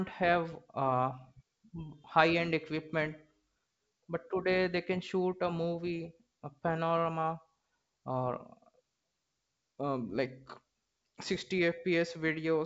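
No technical faults can be heard anywhere in this recording.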